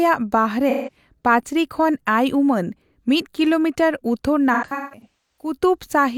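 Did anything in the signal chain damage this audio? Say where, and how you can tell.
Yes: AAC frame loss with concealment at the codec stage. At 0.69–0.96 s, just before "ᱯᱟᱹᱪᱨᱤ ᱠᱷᱚᱱ ᱟᱭ ᱩᱢᱟᱹᱱ", about 170 ms is smeared. After "ᱩᱢᱟᱹᱱ ᱢᱤᱫ ᱠᱤᱞᱳᱢᱤᱴᱟᱨ ᱩᱛᱛᱚᱨ", 4.53–5.54 s has scattered dropouts totalling 0.6 s. The decoder rebuilt each from the last good spectrum.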